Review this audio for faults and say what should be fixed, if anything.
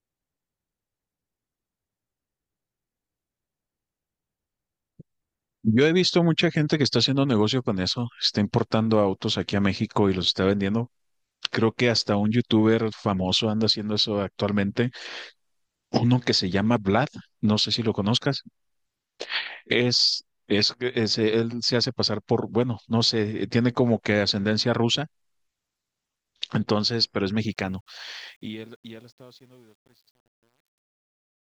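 Truncation distortion on a fade runs from 27.42 s to the end at 31.51 s. The fade-out toward 31.5 s is kept at about 10 bits without dither, so from 28.44 s the falling speech turns gritty. Unlike gate chatter, the grain worsens steadily as the level drops. To prevent it, render fades at high bit depth and add dither before the final reduction.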